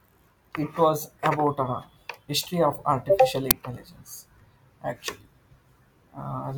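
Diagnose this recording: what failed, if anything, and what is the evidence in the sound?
An uninitialised buffer failed at the driver or buffer stage. At 3.51 s the speech is replaced by a loud crack lasting about 5.3 ms, which fits a 256-sample buffer played out before any audio was written, so leftover memory became samples. Unlike a dropout's silence or a single click, it is a full block of loud garbage.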